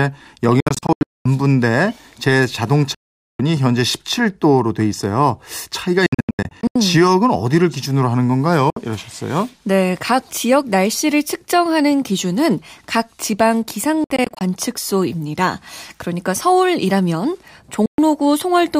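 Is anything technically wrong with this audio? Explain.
Yes. The speech has six Bluetooth dropouts, at 0.60–1.26 s, 2.94–3.40 s, 6.06–6.76 s, 8.70–8.77 s, 14.04–14.41 s and 17.86–17.98 s. The sound cuts to silence, then returns further on, as though it had kept playing. The first, third and fifth are broken clusters of short gaps. The others are single holes. The cause is likely audio packets missing their deadline at the headphones.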